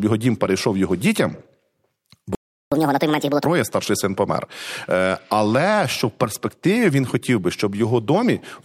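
At 2.35 s the player most likely either ran out of buffered data or had its playback thread blocked, so it had nothing to send to the output. The speech cuts off mid-flow and the clip goes silent for about 0.37 s, until 2.72 s. This is a playback stall: the sound resumes only once the player recovers, leaving an audible gap in the middle of continuous speech.

From 2.72 s to 3.45 s the player works through the backlog left by the stall. It resamples the queued audio to play it 1.5 times faster, which is catch-up at higher speed. Because resampling raises speed and pitch together, the speech sounds hurried and lifted by roughly seven semitones, starting with "старший син помер". Over those 0.74 s it wins back the 0.37 s lost in the gap, then returns to normal speed and pitch.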